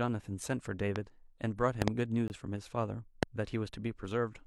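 At 0.96 to 0.98 s a loud pop jumps about 20 dB above the speech, likely from a voltage spike such as a switch or static discharge. On the waveform it is a tall, narrow spike, and on the spectrogram a thin vertical stripe across all frequencies while the speech continues underneath. From 1.82 to 1.90 s two pops follow in quick succession at a similar level, and at 3.23 to 3.25 s a single pop reaches about 25 dB above the speech. From 2.28 to 2.30 s a gap between stream segments leaves 20 ms of hard-edged silence, which fits a join between 2-second segments whose timestamps don't meet. It shows as a flat line in the waveform and a clean vertical blank band on the spectrogram.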